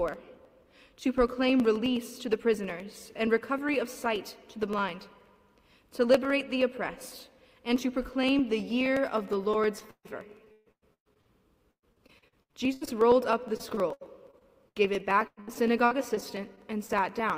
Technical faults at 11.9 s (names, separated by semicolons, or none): repeated packet loss (robotic sound)